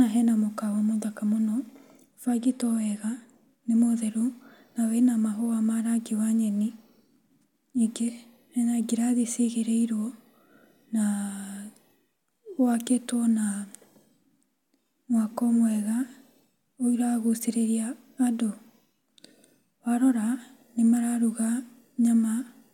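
No technical faults can be heard anywhere in this speech recording. There is nothing to place on a timeline, as no moment in the audio stands out as a defect.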